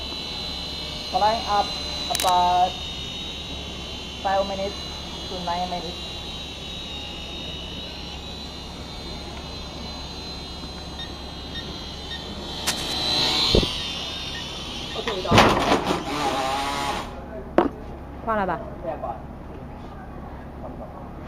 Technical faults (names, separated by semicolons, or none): cable scratch noise